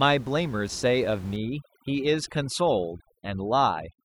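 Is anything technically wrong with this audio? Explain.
Yes. From 1.36 s to the end, overdone noise removal sets in: an over-aggressive noise reducer mutes frequency bands near its noise estimate, leaving the background broken into twinkling specks.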